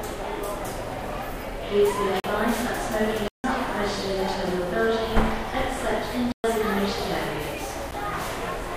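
Sounds break four times into dead holes: 2.20–2.24 s (40 ms), 3.28–3.44 s (160 ms), 6.32–6.44 s (120 ms), and a tick at 7.91 s. These are blocks of digital silence, where the abrupt gaps point to the output buffer not being filled in time.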